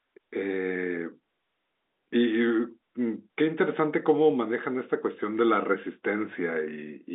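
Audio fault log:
No faults heard anywhere in this speech recording.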